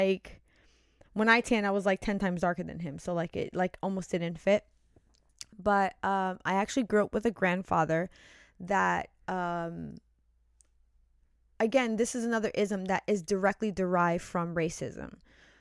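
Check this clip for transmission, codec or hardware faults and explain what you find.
Nothing stood out on listening to this speech recording that would point to a problem in how it was sent, encoded or captured.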